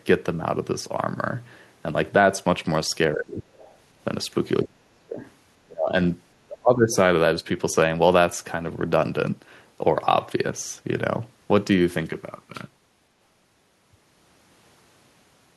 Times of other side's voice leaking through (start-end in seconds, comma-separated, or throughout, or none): 3.57-3.75